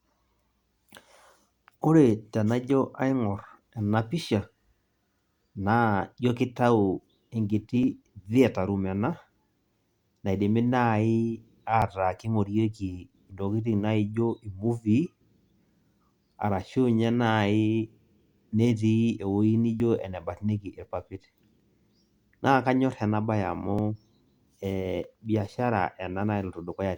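Five tiny skips land in this speech at 7.83, 11.82, 15.82, 19.80 and 23.79 s, almost exactly 4 s apart. That spacing points to overlap between stream segments: neighbouring 4-second chunks claim a sliver of the same time, and the player trims that overlap even though the sound wasn't actually duplicated. Between about 5 and 16 ms of audio vanishes each time, so the waveform jumps and you hear a tiny tick or skip on a steady beat.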